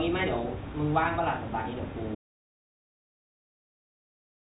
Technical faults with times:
2.15-4.56 audio dropout to silence

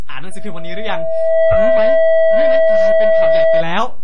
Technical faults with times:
0.00-4.03 DC offset
0.00-4.03 MP3 compression
0.31-3.64 loudspeaker feedback squeal

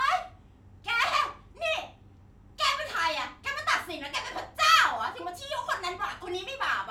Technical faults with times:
none

